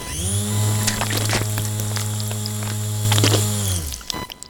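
From the start, a buzzing, chirping noise runs under the everyday sounds, with a pulse rate of roughly 1 kHz and a level around 20 dB below the material. This is computer activity noise: load changes in the processor, graphics card or mouse shift the ground that the audio circuit shares, and that disturbance leaks into the signal. Unlike mains hum, it does not sit at a steady low pitch. Its rhythm follows the machine's workload, not the recorded sound.

At 3.05 s the whole signal, sounds and background noise together, steps up by about 6 dB and stays there to the end. This is a sudden gain jump, most likely a digital gain setting or bit shift applied instantly with no ramp. A performer moving closer or a louder event would raise only the wanted sound. Here the background noise jumps by the same amount at the same instant, which shows the level change came after the sound was captured.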